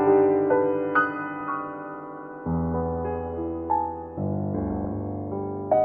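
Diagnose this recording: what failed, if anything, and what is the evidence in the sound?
DAB burbling in the broadcast reception and MP2 decoding stage. From 1.41 to 1.52 s and again from 4.58 to 4.85 s the music picks up short blips of noise. Weak reception left residual bit errors, a few tenths of a percent, which corrupted samples and scale factors, so single sub-bands jumped in level for up to a frame. On a spectrogram this shows as flickering rectangular band-limited tiles, with matching short bursts in the waveform.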